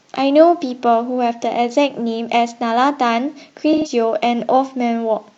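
Speech clip with AAC frame loss and concealment from 3.72 to 3.91 s. The decoder rebuilt missing audio from the last good spectrum, leaving a smeared patch that fits about three lost frames.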